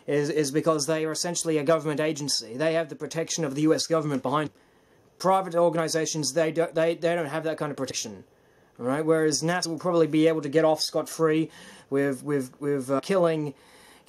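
Compressed frames are skipped at 4.46–4.48 s, 7.90 s, 9.64–9.66 s and 12.98–13.00 s. The sound jumps ahead by roughly a fifth, a tenth, well under a tenth and a tenth of a second, which fits 23.2 ms frames. The waveform shows an abrupt envelope change, and the spectrogram a sudden vertical seam.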